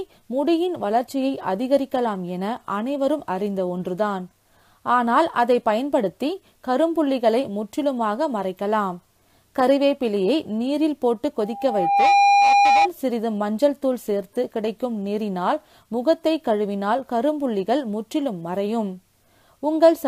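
A loudspeaker feedback squeal runs from 11.40 to 12.89 s: a single 805 Hz tone swells in under a second to about 5 dB above the surrounding audio, as a microphone picks up its own loudspeaker and the loop gain exceeds one at that frequency.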